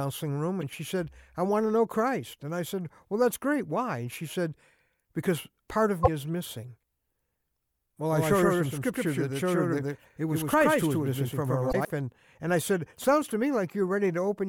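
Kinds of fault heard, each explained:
Damaged data in a compressed stream: brief glitches near 0.61, 3.32, 6.02 and 11.69 s, each as the decoder loses sync and resyncs, unlike plain clicks.
Doubled audio track: from 8.12 to 11.85 s an equally loud copy trails by about a tenth of a second, likely a second, slower capture path, with no decay, unlike room echo.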